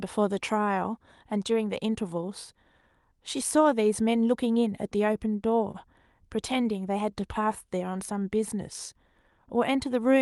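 At 5.71 to 5.77 s the speech hangs in a short stall from a late packet: the jitter buffer ran dry, so about 27 ms of the last sound was stretched with a slight buzz or dip. Unlike a lost-packet dropout, nothing is skipped. The speech resumes where it stopped, just 27 ms later, over a call path band-limited near 12 kHz.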